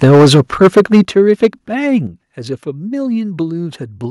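Speech, and from the very start at 0.03 s until about 1.47 s it's suffering microphone overload. The loudest syllables have a harsh, crackly edge where the peaks run flat into the converter's ceiling, roughly a tenth of the waveform sliced off at the top, which puts the input about 9 dB hotter than it could take. Most likely the mic's input gain was simply set far too high. On top of that you get microphone volume stepped down three times: at 0.04 s the level drops by about 2 dB, at 1.05 s by about 9 dB, and at 2.07 s by about 6 dB, voice and background sinking together in one abrupt step each time. That pattern likely comes from the call software noticing the clipping and pulling the device's input volume down in stages, with the big 9 dB cut landing partway through the distorted stretch.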